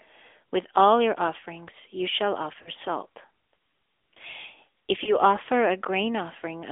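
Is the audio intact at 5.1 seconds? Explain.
No. From 5.04 to 5.19 s the sound briefly dips and warbles before steadying: a lost AMR speech frame. One 20 ms frame failed its radio checksum, so the decoder filled the gap by repeating the previous pitch and vocal-tract settings at lowered gain until good frames resumed.

Beneath that, the AMR narrowband mobile codec is plainly audible: the band stops around 300 Hz and 3.5 kHz, and the sound has a buzzy, synthetic edge. It is rebuilt from a vocal-tract model and sparse pulses at a rate that fits roughly 10 kbps.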